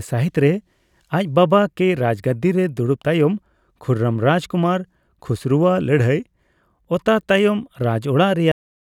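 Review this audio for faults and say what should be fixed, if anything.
The speech stops abruptly at 8.52 s, in the middle of a sound, and drops straight to digital silence for the last third of a second, with no natural decay or room tail. This is a cut-off end: the final buffers of audio were never written out or played, so the recording was truncated before the sound had finished. To prevent it, flush and write all pending buffers before closing the file or stopping the stream.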